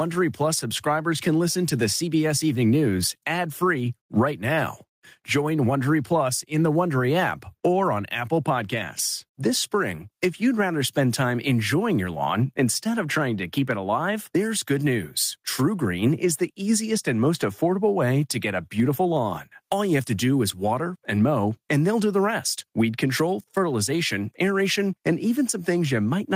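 Gain pumping runs through the whole speech clip. The gain is pulled down on every loud sound. The level swing is about 15 dB. Loud and quiet parts sit squashed together. The likely cause is input gain set far too high, with a fast limiter clamping down.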